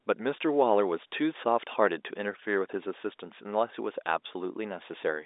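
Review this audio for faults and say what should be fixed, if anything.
Nothing here needs fixing.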